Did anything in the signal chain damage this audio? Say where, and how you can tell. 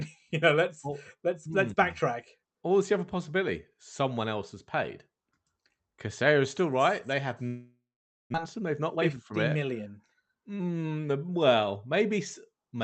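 Yes. From 7.47 to 8.36 s the sound thins into a fading buzz, then silence, and about 0.6 s is lost, likely a long network dropout.

Then a jitter buffer speed-up, 8.59 to 10.36 s: the buffer trims pitch-period slices to shed backlog, so speech runs about 13% fast, same pitch, hurried.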